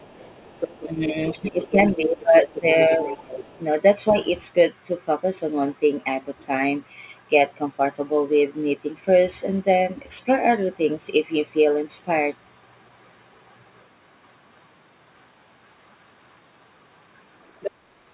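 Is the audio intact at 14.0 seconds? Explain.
Yes, the speech at 14.0 seconds is intact, with no dropout, glitch or other fault at that moment, only the narrowband sound of the call path, which carries nothing above 4 kHz.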